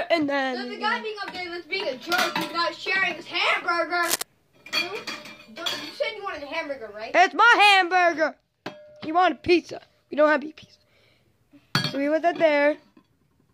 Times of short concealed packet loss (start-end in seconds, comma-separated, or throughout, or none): none